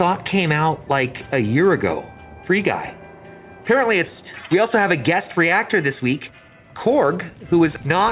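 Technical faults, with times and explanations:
5.87–8.06 s: jitter buffer speed-up. The receiver's jitter buffer held more delay than it wanted, so it repeatedly cut out short pieces one or a few pitch periods long, around 300 ms in total. The sound runs at 113% speed with unchanged pitch, so it feels hurried.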